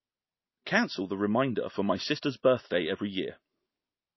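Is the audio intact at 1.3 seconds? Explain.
No. At 1.3 seconds the speech carries the same damage heard from start to finish, the kind left by MP3 compression. Nothing sounds above 5.8 kHz, so the top end is cut flat. The likely cause is an encoder short of bits, which fits a very low bitrate near 24 kbps. It drops the treble at a fixed point and zeroes weak frequency lines that flicker between frames. The result is a plainly audible watery, swirly texture with smeared attacks.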